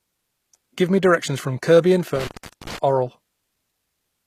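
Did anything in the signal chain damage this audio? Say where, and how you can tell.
Yes. The codec stage shows plainly audible damage throughout: nothing reaches above 14.9 kHz, and the treble below that sounds synthesised rather than captured, with harmonics not aligning across the crossover. This is likely HE-AAC compression with spectral band replication, consistent with a bitrate around 24 kbps.

In the analogue wiring there is an intermittent contact between 2.16 and 2.78 s. The line goes open for about 0.4 s of that span, so the sound drops out or breaks up, with crackle at the edges and faint hiss while the connection is broken.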